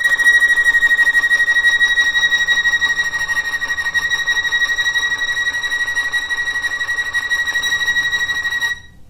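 No technical faults can be heard anywhere in this recording of sounds. Nothing in it calls for a timestamp or a correction.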